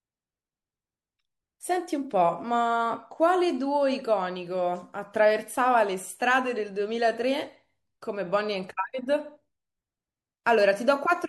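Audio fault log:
10.44–10.46 s, pre-echo. A hiss rises about 17 dB for 22 ms before a sharp speech attack, which sounds smeared. The noise fits a 36 ms transform block with no switch to short blocks. So noise sized for the attack spreads into the silence before it.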